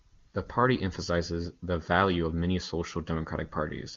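No faults can be heard anywhere in this speech.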